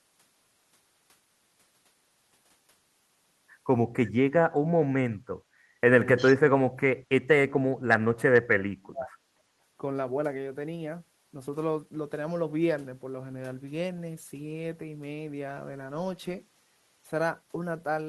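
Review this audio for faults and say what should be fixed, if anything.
From 6.17 to 6.36 s, a faint delayed copy of the speech, about 346 ms late and roughly 20 dB down, is heard: likely an echo leak from the far end's loudspeaker. Better echo cancellation or a headset at that end would prevent it.

From 6.53 to 7.29 s and 7.47 to 9.12 s, the speech drops sharply, as much as around 35 dB, likely from speech suppressed in double talk while both sides spoke. Tuning the echo canceller's double-talk detection would prevent it.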